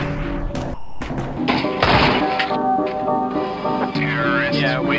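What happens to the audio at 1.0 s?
The sound gives way to steady comfort noise from 0.74 to 1.01 s, about 270 ms, likely sound dropped by the voice detector treating it as background and pausing transmission.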